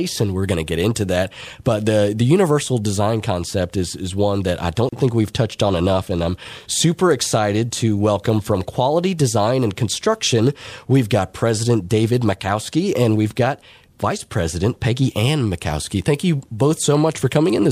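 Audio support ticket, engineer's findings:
Gap at a join of encoded pieces, 4.89–4.93 s, about 35 ms gap between "is one that I" and "think we've touched on". Probable component: segment concatenation. Encoder start delay and last-frame padding left untrimmed. Codec-smeared edges. Unlike a dropout, no audio is lost; speech resumes exactly where it stopped.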